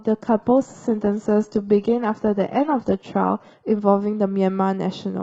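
From the start to about 3.73 s the speech is dull and swirly, with the top end thin or oddly synthetic, which points to an adaptive stream starting at a low bitrate, something like HE-AAC at 16 kbit/s. Then it snaps cleanly to fuller, crisper sound, fitting a step up to roughly 96 kbit/s AAC, with no gap.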